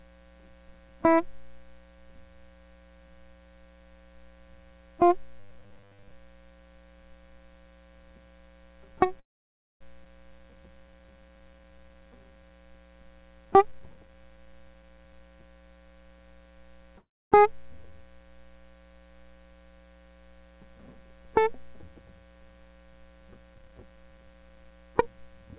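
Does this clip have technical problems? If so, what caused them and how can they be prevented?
Yes. This music clip has several network-related faults.

Robotic sound from repeated short buffers, 5.40 to 6.11 s: the music becomes a rigid, metallic buzz at 100 Hz. This fits a 10 ms piece of audio being replayed while most of the real audio is skipped, likely because new audio arrived too seldom. Unlike a freeze, the sound keeps roughly following the music rather than stalling. Steadier delivery and a larger jitter buffer prevent it.

Call audio freeze, 9.20 to 9.83 s and 16.98 to 17.34 s: the last sound briefly continues and then fades to silence, for about 0.58 s and 0.27 s. This is likely caused by delayed packets leaving the jitter buffer empty. Playback then resumes exactly where it stopped, so a gap is inserted and nothing is lost. That distinguishes it from a skip. Reducing network delay spikes, or allowing more buffering, prevents it.

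Skip ahead, 10.05 to 10.07 s: playback jumps forward, dropping about 0.4 s of music. The two sides of the jump are joined almost seamlessly. Unlike a freeze, no gap is added and material is actually missing. This comes from audio being discarded, on the way or by an overflowing buffer. Avoiding packet loss and buffer overflow prevents it.

Jitter buffer slow-down, 10.32 to 12.51 s: the music runs at 84% speed while keeping its pitch. Repeated pitch periods add 369 ms to rebuild the buffer's reserve. The drawn-out tempo at the same pitch sets it apart from the 100 Hz robotic buzz. More stable packet timing prevents it.

Jitter buffer speed-up, 13.45 to 15.20 s: the music hurries at 134% speed, still at the same pitch. About 0.7 s is removed in small pieces to cut the excess delay after late packets arrive in a bunch. The tempo loses its steadiness, but nothing jumps, which distinguishes it from a skip. 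Avoiding bursty delivery prevents it.

The call codec path cuts everything above 4 kHz, as G.711 A-law does. This is expected behaviour for that codec, not a fault.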